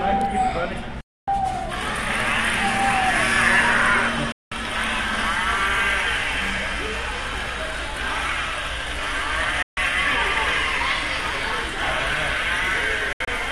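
Digital broadcast dropouts at 1.01, 4.32, 9.62 and 13.13 s occur when the receiver loses frames and mutes within about 3 ms. The holes last 0.26, 0.19 and 0.14 s, and the last is scattered over 0.17 s. Each appears as a flat waveform and a blank full-band column.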